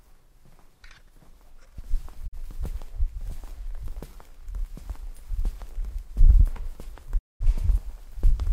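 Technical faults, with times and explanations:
2.26 to 2.37 s and 7.17 to 7.45 s, digital broadcast dropout: the receiver stopped getting usable frames, either because the digital signal was lost or because frames failed their checksum, so it muted until clean frames arrived. The sound fades to silence over about 20 ms and then resumes further along. About 43 ms is missing at the first hole, which fits a single lost frame. About 213 ms is missing at the second, which fits roughly five.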